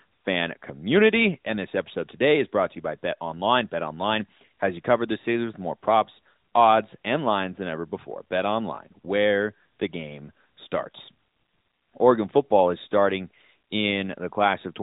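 Nothing in this speech recording stands out as a fault.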